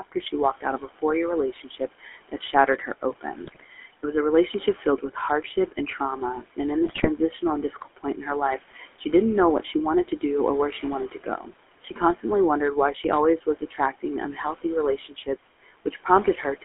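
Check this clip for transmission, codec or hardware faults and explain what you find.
Yes, there are faults: the speech has passed through a GSM full-rate voice codec and an aggressive noise suppressor. The suppressor has clipped parts of the speech in several places, and there are two short bursts of GSM bit errors. The room noise sits about 18 dB below the speech and belongs to the recording rather than the transmission.

Noise suppressor artifacts run through the whole clip. The suppressor estimates the steady background and pulls down each frequency band it judges to be noise, frame by frame, by as much as about 17 dB. As a result, the background drops away in pauses and swells back up under the speech. It differs from plain room noise because the floor moves with the speech instead of staying steady.

The GSM full-rate codec is also present throughout. It models the vocal tract as a filter and drives it with a sparse, regularly spaced pulse excitation. 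The sound is confined to roughly 250 Hz to 3.4 kHz, which fits a narrowband call at around 13 kbps. Its distinguishing mark is a constant buzzy, gravelly roughness on voiced sounds. That separates it from the suppressor's fluctuating background, because the codec roughness sits in the speech itself.

Speech cut by the noise suppressor appears at 0 to 3.87 s, 4.75 to 6.0 s, 6.56 to 8.05 s, 8.73 to 9.06 s, 9.62 to 12.24 s, and from 12.94 s to the end. In these stretches the suppressor mistook quiet speech for noise and turned it down with the background, by up to about 17 dB. The loss is worst in the opening stretch, with roughly a second affected. Soft consonants and word endings sound swallowed. Unlike dropouts, the speech fades instead of vanishing abruptly.

GSM bit errors occur at 3.44 to 3.65 s and 6.84 to 7.07 s, where corrupted bits reached the decoder. Damaged filter, pitch and gain parameters warp the spectrum and spike the level across roughly ten 20 ms frames each time. 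This produces brief squawks, pops and gargling. It differs from the steady codec roughness because it comes in short, violent bursts. It also differs from the suppressor cuts because the sound is distorted rather than quieter.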